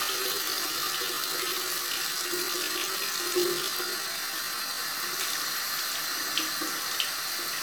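A time-stretched section runs from 0.0 to 4.8 s in this recording of sounds, slowed to 0.625 times its original pace while the pitch holds steady, so it drags before the pace jumps back abruptly. The likely cause is software repeating short pieces of the audio to lengthen it without lowering the pitch.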